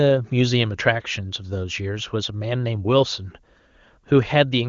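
No technical faults can be heard in the speech. It passes through an AMR wideband (HD Voice) codec, which caps the audio at about 7.3 kHz, and the lack of audible roughness fits one of its higher rates, around 23.85 kbit/s.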